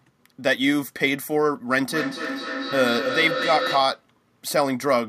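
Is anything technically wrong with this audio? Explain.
Yes. From 1.79 to 4.09 s there is feedback echo between two devices. A second device replays this speech into the microphone, and each word returns about every fifth of a second. The loudest repeats are about 6 dB below the speech.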